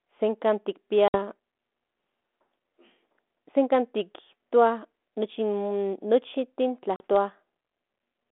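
At 1.08 s and 6.96 s, packet loss on the ADPCM call drops 60 and 40 ms; the decoder loses step, so speech returns after each hole slightly distorted.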